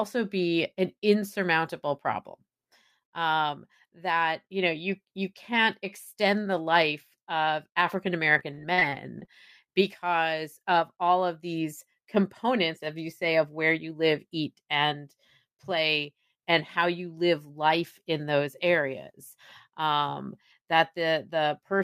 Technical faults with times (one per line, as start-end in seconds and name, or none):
8.33-9.29 repeated packet loss (robotic sound)